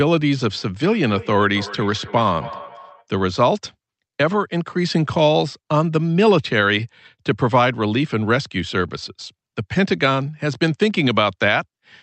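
From 0.83 to 3.06 s, the speech is shadowed by a thin, ringing repeat that trails each phrase by roughly a third of a second, peaking about 16 dB below the direct speech. This is feedback echo between two devices: a second device in the same room plays back what the first device's microphone sent, and that microphone captures it again. Each device's echo canceller only removes its own playback, so the delayed copy returns at a steady interval.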